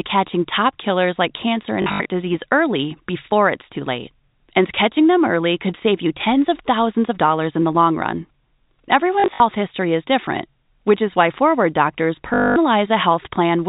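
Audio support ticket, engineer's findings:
Packet loss with last packet repeated. Short robotic stutter at 1.82–2.1 s, after "top killers like cancer", at 9.2–9.4 s, before "history is different which", and at 12.34–12.56 s. The receiver's concealment replays the last packet. The repeats buzz near 50 Hz, which fits 20 ms packets.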